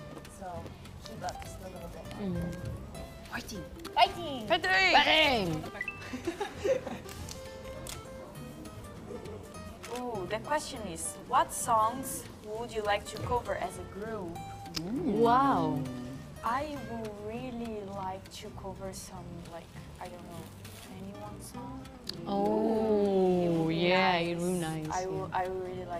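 No technical faults can be heard anywhere here.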